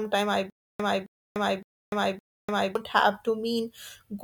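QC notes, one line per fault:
0.5 to 2.75 s, stutter with silent gaps: a 268 ms snippet of speech repeats four times, each followed by 295 ms of digital silence, so it pulses every 563 ms. Likely a stalled stream replaying its last chunk per retry, so the audio meant for that stretch is lost.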